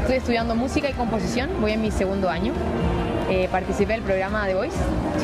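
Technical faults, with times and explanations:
0.94–0.96 s and 3.22–3.24 s, repeated buffer: a tiny slice of sound plays twice with a hard join, so you get a quick click or buzz rather than a clear stutter. That length fits a 20 ms buffer being replayed when fresh audio arrived late. Nothing seems skipped.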